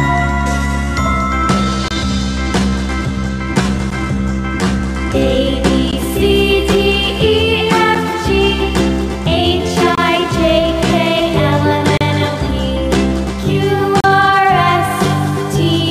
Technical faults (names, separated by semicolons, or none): gap between stream segments